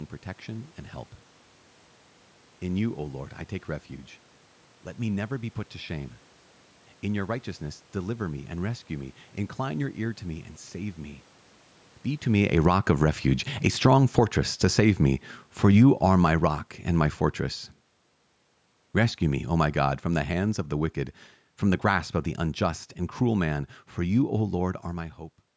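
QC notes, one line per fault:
12.26–24.35 s, automatic gain falling: the speech sinks steadily over roughly 12 seconds, ending about 16 dB quieter, with the room noise behind it dropping by the same amount. That shared fall means the whole signal is being turned down, not just the talker moving, though the talker does shift position near 12 s. The automatic gain control judged the input too loud, or its background noise too strong, and kept lowering its gain.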